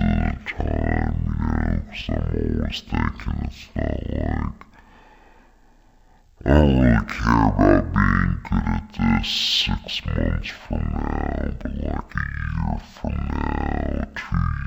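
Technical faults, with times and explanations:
Throughout: stereo read as mono. The speech runs at half speed and an octave low, with pitch dropped 12 semitones, because left and right samples are played in sequence as one channel. A spectrogram shows stretched, lowered harmonics plus a fainter mirrored copy in the upper half.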